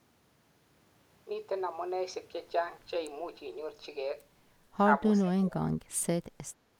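From 5.22 to 5.68 s the echo canceller likely confused overlapping talk from both ends with its own loudspeaker echo and clamped down, speech suppressed in double talk. The speech sinks by about 20 dB for nearly half a second.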